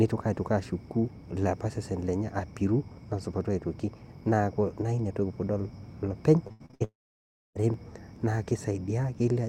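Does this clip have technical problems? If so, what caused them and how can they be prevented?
Yes. From 6.47 to 6.82 s the speech turns choppy from repeated packet loss, heard as a robotic sound. Five short holes, the longest about 83 ms, are each filled by stretching the preceding sound, so roughly 60% of that span is concealed rather than real. Unlike a single dropout, the audio keeps returning between holes, producing a stuttering texture instead of one continuous gap. A wired connection or a larger jitter buffer would prevent this.

Right after, from 6.84 to 7.57 s, comes what is likely a long network dropout. About 720 ms of speech never arrives. The last sound is carried on briefly as a fading buzz, then about 630 ms of near-silence follows before the speech resumes with that stretch missing. The long silent tail tells it apart from the rapid patched-over holes just before it. A more stable network link with redundancy or forward error correction would prevent it.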